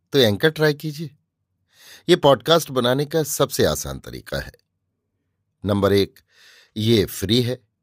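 Two unsynchronised clocks in the chain likely drift apart by around 50 ppm, forcing a single sample to slip roughly every 0.4 s. This speech clip therefore carries clock slip clicks, about twenty faint regular ticks from 0.25 s to 7.72 s.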